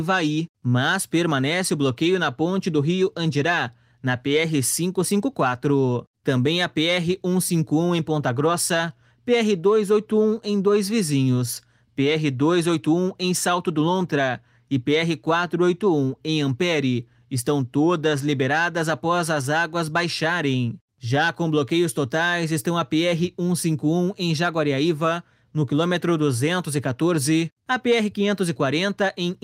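No technical faults are audible.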